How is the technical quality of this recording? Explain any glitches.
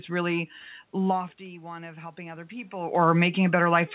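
One glitch stands out: automatic gain rising from about 1.46 to 2.99 s. Around 1.0 s the talker seems to move away from the microphone, dropping the level by about 16 dB. The automatic gain control treats the quieter input as a cue to turn up, raising its gain by about 5 dB over a second and a half. The voice and the room noise swell together, so the background audibly creeps up rather than the speech alone recovering. The whole clip is band-limited to 4 kHz, the narrowband sound of a phone call, which fits G.711 A-law at 64 kbps.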